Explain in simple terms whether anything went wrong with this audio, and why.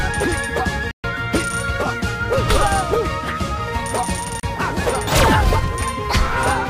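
Something did go wrong, twice. The sound cuts to silence from 0.91 to 1.04 seconds, a gap of about 128 milliseconds. It happens again from 4.40 to 4.44 seconds, a shorter hole of about 32 milliseconds. This is a digital broadcast dropout. The receiver lost the signal or got damaged data, so it muted itself until good data arrived. Whatever was sent during those gaps is gone for good.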